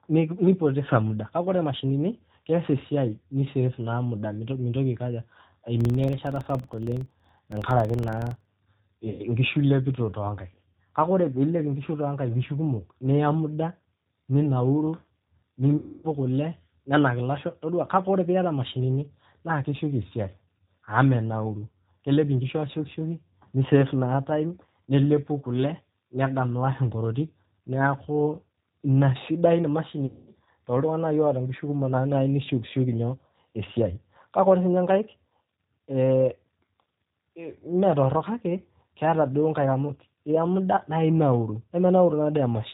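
Throughout the clip the speech carries plainly audible G.729 codec damage. This 8 kbit/s VoIP coder keeps only a vocal tract filter, a pitch predictor and a few pulses per frame, so nothing above 4 kHz survives and the voice sounds slightly rough and synthetic. Unlike plain low-pass filtering, the coarseness comes from the model itself: it is in the texture of the voice, not just in missing treble.

From 5.81 to 8.54 s a filter restarted on every block adds a regular tick, or a low buzz, at about 21.5 Hz. That rate fits a filter that forgets its state every 2048 samples and starts each block from silence, leaving a small transient at every boundary. It sets this fault apart from random clicks or dropouts: the ticks are evenly spaced, and they get louder and softer with the level of the speech.

VoIP packet loss concealed by the speech codec occurs three times, at 9.10 to 9.24 s, 15.77 to 16.06 s and 30.06 to 30.29 s. 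About 90 ms, 270 ms and 210 ms of audio are missing, which points to roughly three, nine and seven lost packets. The decoder carries its last pitch and filter forward while lowering the gain, so each gap becomes a stretched buzzy tone or coloured noise that fades. This differs from a hard dropout, where the sound simply goes silent. The speech also stays weak or distorted for a moment after each gap ends.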